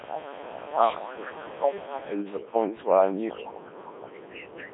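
From start to end the speech runs through overdone noise removal. The suppressor was set too hard. It drops single frequency bands whenever they sit near its noise estimate. Quiet parts of the voice vanish with the noise. Between phrases the background falls to near silence, dotted with small twinkling specks.

The whole clip also carries Codec 2 vocoder damage, and it is heavy. The sound points to a very low rate, which fits a 1.3 kbit/s mode. The band is cut to about 200 Hz to 3.6 kHz. This vocoder keeps only pitch, voicing, energy and a rough spectral shape. The decoder then rebuilds the voice from sine waves. So the real waveform is gone. The speech sounds robotic and buzzy throughout.

Faint scraps of a second voice sit under the speech from 0.00 to 0.76 s and from 1.06 to 1.58 s, at about 15 dB below. Quieter scraps, about 20 dB down, follow at 1.75 to 2.07 s and 3.30 to 3.50 s. This is the other side's voice leaking through. 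Its likely cause is a far-end loudspeaker picked up by the microphone and not fully cancelled.

From 3.30 to 4.17 s the main voice sinks. The dips reach roughly 20 dB at their deepest and cover well over half a second in total. This span overlaps the last leak. This is speech suppressed in double talk. The likely cause is an echo canceller that heard both sides at once. It could not tell its own talker from the echo, so it turned everything down. The voice drops.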